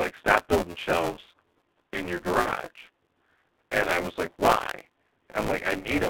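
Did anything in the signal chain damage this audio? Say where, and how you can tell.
Yes. The damage comes from the codec, the playback buffer and the network.

At the codec stage, the G.723.1 codec runs throughout. The audio is confined to roughly 250 Hz to 3.7 kHz. Nothing above that survives. The speech sounds muffled and hoarse, and consonants smear together. The damage is heavy. That fits a low-rate coder near 6 kbit/s working in 30 ms frames. Its voice model updates slowly and cannot follow fast changes, so detail is lost.

At the driver or buffer stage, buffer tearing runs through the whole clip. A steady buzz sits at 172 Hz. It appears only while sound is present. That rate fits a 256-sample buffer. The writer and the reader of the ring buffer have drifted and now cross inside each period. Somewhat under half of each buffer repeats audio from about 20 ms earlier. The hard joins on either side produce the rattle.

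At the network stage, VoIP packet loss was concealed by the speech codec. It happens twice. The first is from 2.39 to 2.51 s, just after "building shelves in your". The second is from 5.79 to 5.89 s. Each time about 60 ms was lost, which fits two missing frames. The decoder stretched its last pitch and filter into a sound that faded out. It then took a moment to recover.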